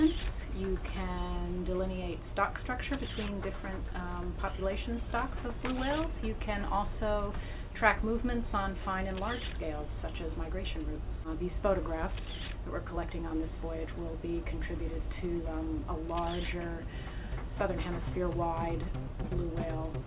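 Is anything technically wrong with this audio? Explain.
No, nothing is technically wrong with this audio; it is a call-quality recording whose content stops at 4 kHz, as the call codec's bandwidth limit would predict.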